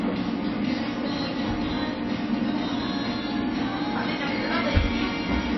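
From start to finish the sound is dull and watery, with a swirling, unstable texture and smeared attacks, and nothing is present above 5.8 kHz. This is likely MP3 compression at a starved bitrate, about 24 kbps, with the encoder discarding treble and flickering weak frequency lines on and off.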